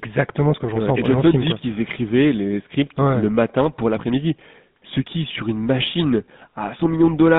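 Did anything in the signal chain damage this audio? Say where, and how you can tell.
Yes, at the codec: GSM full-rate coding throughout leaves buzzy, gravelly speech band-limited to roughly 150 Hz–3.7 kHz, consistent with 13 kbps pulse-excited vocal-tract modelling.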